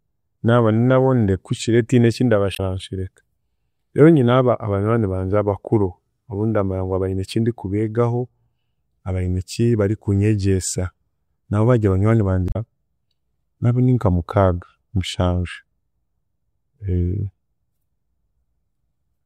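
Damaged data in the compressed stream interrupts the speech twice. Bytes in the coded stream are corrupted, so the decoder misreads those frames, loses sync and has to hunt for the next valid frame header. The first break runs from 2.52 to 2.60 s, right after "tihine eki"; the second from 12.46 to 12.56 s, following "nabo bari banywani". Each is heard as a chirp, squawk, click or short hole, roughly a tenth of a second, cutting into the speech.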